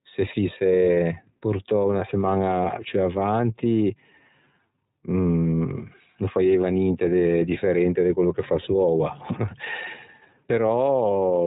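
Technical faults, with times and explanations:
throughout, iLBC codec: nothing above 3.8 kHz, and a plainly rough, synthetic edge from 30 ms frames each coded on their own, which fits the 13.33 kbps mode.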